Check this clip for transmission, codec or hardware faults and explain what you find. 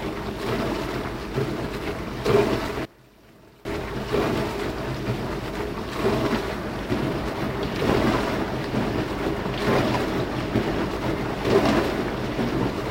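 One fault stands out, from 2.85 to 3.65 s: for about 0.8 s the sound collapses to a faint remnant, roughly 22 dB down, then returns at full level. This is most likely one channel inverted. With one stereo side flipped in polarity, whatever both channels share cancels when summed to mono, so the centred body and low end disappear and only the small inter-channel difference survives. Unlike a dropout or mute, the sound never goes fully silent.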